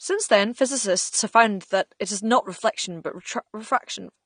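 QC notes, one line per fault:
Throughout, AAC compression: the speech has no content above 9.7 kHz and sounds dull, with plainly audible coding damage across the whole clip. The likely cause is lossy AAC-LC encoding at a low rate, consistent with about 32 kbps, where the encoder runs short of bits, lowers its cut-off and quantises the remaining frequency lines coarsely. That strips the upper spectrum and leaves a smeared, processed texture on the voice.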